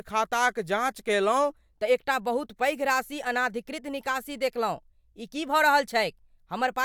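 From 1.50 s to the end, the speech plays as a section at the wrong speed, running 1.12 times faster than it was recorded, so the pitch rises by about two semitones and the delivery sounds high and hurried. This is likely a playback or editing clock mismatch. On a spectrogram, the harmonic stack jumps upward at 1.50 s and its lines spread further apart, while the waveform shows syllable envelopes packed visibly closer together.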